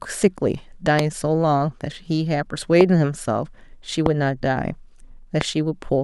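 At 0.99 s a loud pop sits on top of the speech, roughly 20 dB above it, and the same single pop returns at 2.81, 4.06 and 5.41 s. Each lasts about 20 ms. The cause is likely a voltage pulse entering the chain, from a plug, switch, static discharge or driver glitch, that the following circuits shaped into a thump while the speech carried on underneath.

At 1.52 s there is a different event, dropped samples, heard as one thin, sharp click. The likely cause is a single sample, or very nearly, missing from the stream, so the waveform steps straight to a later value. Unlike the pops, nothing is added: the tick has no body or decay, only a hairline vertical streak across the spectrum, and far too little is lost to remove any of the speech.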